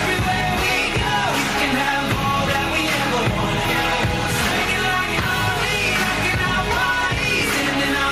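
Gain pumping throughout: the gain swings around 5 dB between loud sounds, likely from excessive gain driving a fast limiter.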